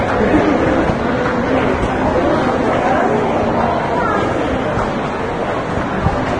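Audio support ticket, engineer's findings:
Vorbis compression, throughout: likely a low-bitrate Vorbis encode, around 24 kbps. Nothing above 9.7 kHz, and the treble is coarsely quantised into grainy hiss, with roughened tones and smeared attacks.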